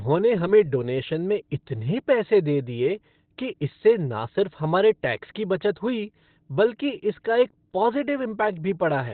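The clip is speech, and the damage runs from start to finish. The sound is muffled and hoarse. Nothing is heard above about 4.3 kHz. This is heavy damage, likely from Opus compression at a very low bitrate, which fits roughly 12 kbps. At that rate the encoder falls back to its narrowband speech mode, cutting the bandwidth and coarsening the detail.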